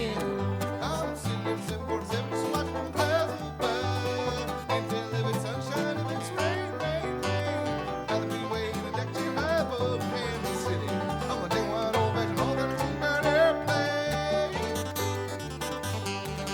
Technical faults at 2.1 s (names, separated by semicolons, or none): none